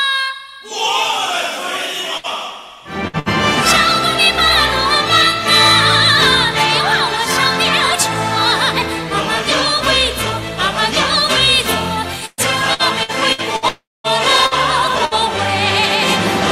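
At 2.17, 3.07 and 3.19 s, bursts of packet loss each hold the last sound for about 60 ms, fade it, then skip ahead. From 12.26 to 13.65 s, repeated packet loss produces choppy sound with pieces missing: five closely spaced holes, the longest 120 ms, patch about a quarter of the stretch. From 13.68 to 14.07 s, the sound fades and then drops to about 220 ms of true silence before resuming, with roughly 360 ms missing. That silence is likely a long network dropout. Two more bursts of packet loss follow at 14.46 and 15.05 s, each a short held-and-faded fill.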